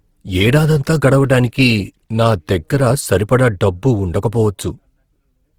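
Speech, with Opus compression damage running through the whole clip. The voice sounds grainy and rough, and its tonal parts turn noisy. There is little swirling and few obvious gaps in the spectrum. That fits an encoder that keeps the energy in every band but fills starved bands with folded or noise content. The bandwidth stays full, reaching about 20.2 kHz. The damage is plainly audible and likely comes from a low bitrate in music mode, around 16 kbps.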